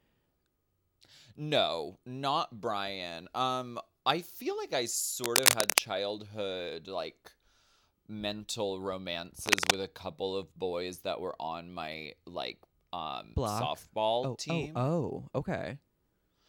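Scratchy, rustling bursts of cable scratch noise cut in from 5.24 to 5.80 s, after "I feel like I", well above the speech, and again from 9.46 to 9.76 s, before "a couple of boys", somewhat quieter. This is likely a worn cable or connector being moved.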